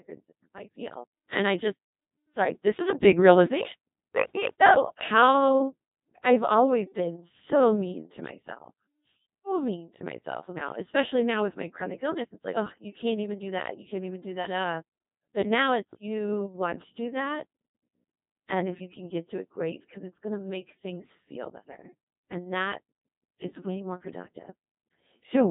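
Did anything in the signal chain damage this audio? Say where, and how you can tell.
Yes, at the codec stage, and the damage is heavy and runs through the whole recording. The speech sounds robotic and buzzy, and nothing is left above about 3.8 kHz. That is the Codec 2 vocoder, and the low rate fits its 2.4 kbit/s mode. The codec never carries the waveform itself. It sends only pitch, voicing, energy and a coarse spectral envelope, and the decoder rebuilds the speech from sine waves, which produces the synthetic, buzzing quality.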